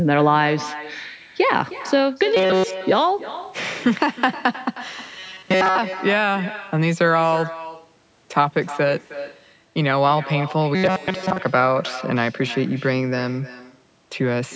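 From the very start, the speech has an echo with no canceller running underneath it. Every phrase comes back roughly a third of a second later at about 14 dB below the original, a fainter, hollower copy trailing the talker. That's the far end's loudspeaker feeding its own microphone, with nothing in the chain subtracting it before the audio returned across the network. It never lets up, so the doubling sits on everything through to the end.

On top of that, there are three bursts of robotic sound from repeated short buffers: 2.37 to 2.77 s, 5.19 to 5.79 s, and 10.75 to 11.39 s. Each turns the voice into a stiff metallic buzz pitched at 188 Hz, which fits a buffer of about 5.3 ms being looped. The likely cause is audio arriving too slowly, so the player recycles that last tiny chunk and skips the real signal. In the first burst it's essentially all repetition. The later two are mostly repeats, so a little of the real speech contour still pokes through the buzz.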